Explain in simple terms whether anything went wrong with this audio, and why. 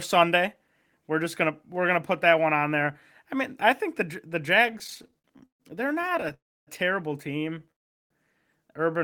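Yes, two kinds of trouble show up in this speech.

The first is repeated stalls (stutter). From 4.63 to 5.62 s, the audio packets kept arriving late, so the receiver's waiting store of sound ran dry 17 times. Each time it filled the pause by stretching out the last bit of sound, the longest fill lasting 140 ms, and about a third of that stretch is filler. The same happens more briefly from 6.02 to 6.32 s, with 8 very short stalls. Nothing is lost, but the speech drags and stutters.

The second is a call audio freeze, twice. The likely cause is packets being held up on the way, so the receiver ran out and carried the last sound on, fading it away. From 6.34 to 6.69 s a gap of about a third of a second is inserted, mostly silence. From 7.71 to 8.12 s a gap of about 0.39 s is inserted, almost all of it silent. When sound resumes it picks up where it stopped, so nothing is missing, just delayed.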